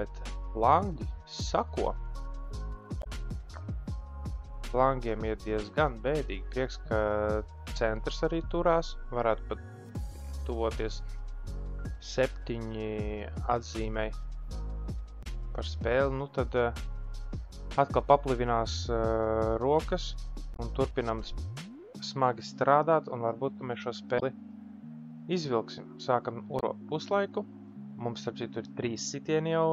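Damaged data in a compressed stream makes the decoder misread frames and hunt for sync, producing short blips of about 70 ms at 2.99, 15.20, 20.53, 24.16 and 26.56 s.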